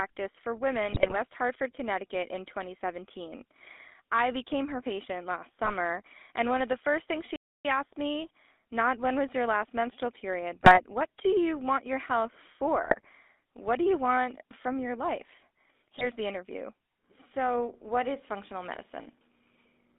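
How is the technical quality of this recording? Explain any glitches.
The recording is poor technically: the whole clip carries plainly audible phone-codec damage, and it has several bursts of corruption and one dropout.

GSM full-rate codec damage runs throughout the speech, and it is plainly audible. The codec models the vocal tract and drives it with a sparse, regularly spaced pulse excitation. That gives the speech a buzzy, gravelly roughness, which fits the 13 kbit/s full-rate coder. The line band is roughly 250 Hz to 3.6 kHz. A spectrogram would show nothing above that ceiling and would show harmonics that look smeared and grainy.

GSM bit errors occur at 0.87–1.17 s, 5.64–5.71 s (right after "became her patient last"), 10.55–10.84 s, 12.83–13.06 s, and 15.98–16.06 s (between "want from your life" and "the interview"). In each burst, corrupted bits reach the decoder and scramble its filter, pitch and gain values frame after frame while the burst lasts. 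The speech breaks into squawks, pops and gargling. On a waveform these show as sudden level spikes. On a spectrogram they show as blotchy, misplaced energy.

A playback stall runs from 7.36 to 7.65 s, cutting off about 287 ms after "of the first things". The speech then resumes with "asked me not when". The likely cause is that the player ran out of data or its thread was blocked, so output went silent until it recovered. It is heard as an abrupt mid-flow halt. The waveform shows a flat gap, and the spectrogram shows a clean vertical blank band.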